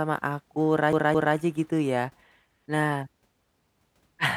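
From 0.93 s to 1.36 s the speech falls into a CD stuck on one turn: a fragment of about 0.22 s plays twice in a row, each pass cut off by a tiny mute where the pickup jumps back a track, before the speech moves on into "gitu ya". A scratch returning the laser to the same spot causes it. Unlike a stretched or smeared network concealment, each repeat is an identical, crisp copy at a steady rate.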